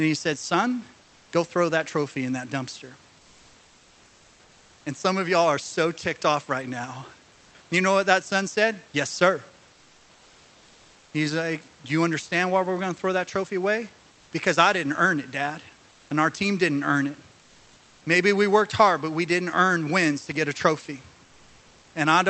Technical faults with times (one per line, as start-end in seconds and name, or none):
15.91-16.09 comfort noise in place of the background
17.41-18.01 comfort noise in place of the background